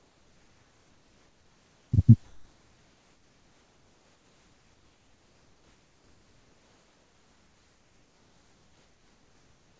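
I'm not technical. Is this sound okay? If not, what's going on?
No. The sending side of the call likely stopped transmitting during the quiet stretches, and the receiving side filled them with made-up noise. This is comfort noise in place of the background. From the start to 1.92 s, and again from 2.24 s to the end, the real room sound is replaced by a steady, featureless hiss that is slightly quieter than the actual background. Any detail in the surroundings is flattened into that even wash.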